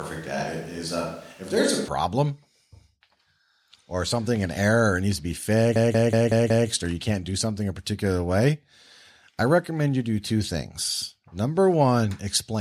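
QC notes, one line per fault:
0.00–1.88 s, switch to a distant microphone: already under way at the start, the sound is roomy and thin, about 5 dB quieter, with room noise about 25 dB below it. It snaps back to close pickup at 1.88 s, likely a failed close mic.
5.76–6.69 s, system hang loop: after "error needs to be", one 186 ms slice repeats identically five times at 5.38 Hz, a machine-gun stutter that fits an 8192-sample buffer. It resumes at "or you can't do" with essentially nothing lost. The copies are exact, unlike varied concealment.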